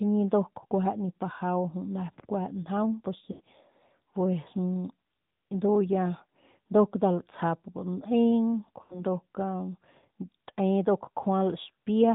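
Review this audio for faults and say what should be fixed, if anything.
AMR narrowband mobile codec, throughout: the speech is confined below 4 kHz and has the buzzy, synthetic edge of a pulse-driven vocal tract model, which points to a mid-rate mode around 10 kbps. Carry the call over AMR-WB or a wideband path so the upper band survives.

Lost AMR speech frames, at 3.32 to 3.42 s and at 8.82 to 9.04 s: each time the sound smears and fades as the decoder repeats its last pitch and vocal tract settings with falling gain. That fits about 80 ms of missing frames, and the speech returns weak or rough. Strengthen the radio link or add channel protection so frames stop failing their checksum.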